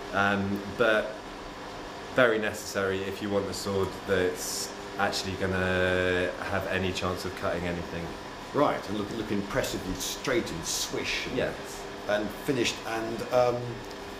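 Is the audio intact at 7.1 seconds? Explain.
Yes, the audio is intact at 7.1 seconds, with no dropout, click, distortion or other fault at that moment.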